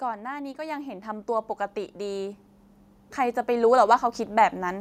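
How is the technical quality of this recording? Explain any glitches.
The recording has two automatic gain rising faults. From 0.41 to 2.47 s, then 3.16 to 4.76 s, the gain control judged the input too quiet and raised its gain, so speech and background swell together by about 7 dB, then about 4 dB.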